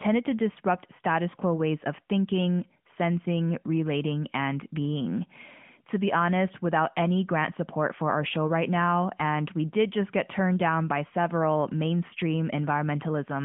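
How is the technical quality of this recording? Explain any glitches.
The recording has no glitches, and the only trace of its transmission path is the narrow 150 Hz to 3.4 kHz band and light coloration of the AMR narrowband mobile codec, which fits its highest 12.2 kbps mode.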